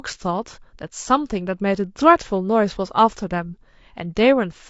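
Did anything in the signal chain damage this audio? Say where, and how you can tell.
Yes, at the codec stage, throughout the speech. The voice sounds rough and grainy from start to finish, with noise filling the gaps between pitch harmonics and a top band that sounds thinned or synthetic. That points to low-delay AAC compression, likely AAC-ELD as used on video calls. Its short frames of about 10 ms cannot resolve individual harmonics well, and the plainly audible damage fits a bitrate of around 32 kbps.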